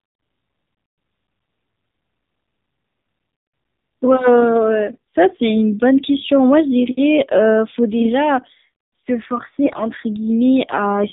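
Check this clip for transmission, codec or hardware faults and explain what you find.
Two faults are present: the speech has passed through a low-rate mobile codec for its whole length, and two short stretches carry AMR bit errors.

AMR narrowband mobile codec, throughout: the speech was sampled at 8 kHz and rebuilt from a vocal-tract model fed by a handful of pulses per subframe. Nothing above 4 kHz survives, so the sound is muffled and telephone-like. The damage is plainly audible: the voice is buzzy and synthetic, which fits one of AMR-NB's lower modes, around 7.4 kbps.

AMR bit errors, at 8.00 to 8.10 s and again at 9.64 to 9.84 s: on a weak radio link, bits in the less protected part of each frame arrived flipped. The checksum on the critical bits still passed, so the decoder used the damaged frames instead of discarding them. The excitation pulses land in wrong positions, and gain and spectral detail drift. 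Pitch and loudness hold roughly steady, but the voice turns hoarse, scratchy and gargly. The first burst is short but heavily corrupted, fitting a few 20 ms frames with a high error rate. The second is longer and milder, with a lighter scattering of errors.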